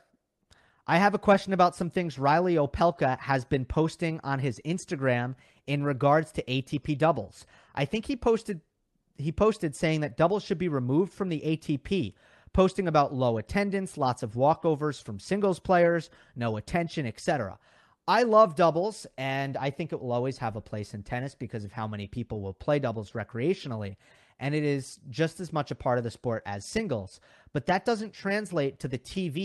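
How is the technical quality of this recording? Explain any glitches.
Nothing stood out on listening; the speech has the character of a call path with its upper range limited to about 12 kHz, and no glitches were heard.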